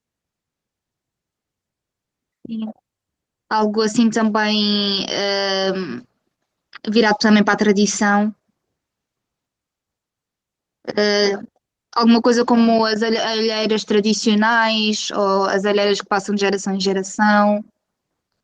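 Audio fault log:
No fault to enter in the audio fault log.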